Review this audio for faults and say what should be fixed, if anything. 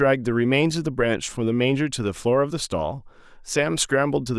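No faults found in the speech; nothing needs fixing.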